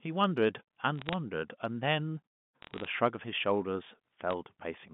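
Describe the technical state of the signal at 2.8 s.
At 2.8 s the speech carries a brief patch of crackle, a scatter of sharp ticks from 2.62 to 2.88 s, while the speech itself keeps its form underneath. These are bit errors on a digital phone line: on this G.711 mu-law link, a flipped bit, at an error rate well under one percent, corrupts a single sample. When the flip lands on a high-order bit or the sign of a loud sample, that sample jumps far off its true value and clicks.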